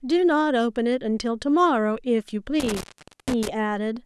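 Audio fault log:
2.60–3.49 s, intermittent contact: the speech drops out abruptly as a loose connection in the signal path breaks, with the line open for about 471 ms in total across this span. Crackle marks the edges where the contact scrapes open and closed, and faint hiss remains while it is open. On a waveform the signal collapses to a near-flat trace bracketed by sharp spikes; a spectrogram shows broadband vertical streaks at the edges around a dark, low-level gap.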